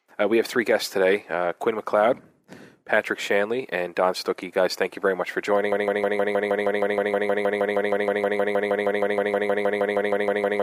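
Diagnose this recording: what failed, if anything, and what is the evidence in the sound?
A stall in the player, encoder or stream likely left it resending its last held fragment: a broken-record loop. From 5.72 s to the end, a 157 ms piece repeats exactly, back to back, 31 times, and the audio due there is lost.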